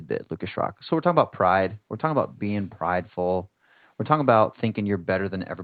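No technical faults in this speech recording: the top end stops at around 8 kHz, which fits a call codec such as Opus at a modest bitrate, and the room noise sits about 53 dB below the speech.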